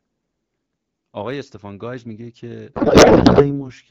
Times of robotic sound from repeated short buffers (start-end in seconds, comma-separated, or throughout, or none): none